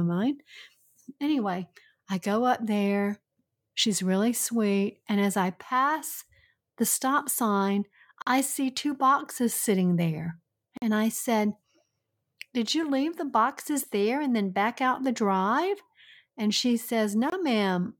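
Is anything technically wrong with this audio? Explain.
Yes. The speech contains three blocks of digital silence. The first runs from 8.22 to 8.27 s, between "pass the stop sign" and "see two boxes sitting." The second runs from 10.77 to 10.82 s, just after "two boxes sitting there." Both last 46 ms, which fits a 2048-sample buffer that wasn't filled in time. The third, at 17.30 to 17.32 s, lasts 23 ms. Each cut drops straight to silence and back with no fade. The result is a short hole.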